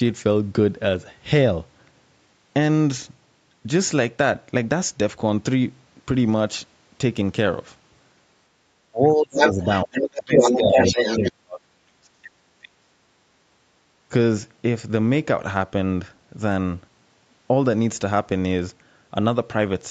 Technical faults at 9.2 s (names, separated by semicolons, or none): speech suppressed in double talk